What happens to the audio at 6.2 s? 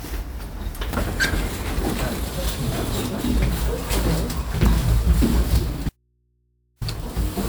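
From 5.89 to 6.81 s the sound cuts abruptly to faint mains hum, an audio dropout to a faint residue, likely signal loss on a still-live input.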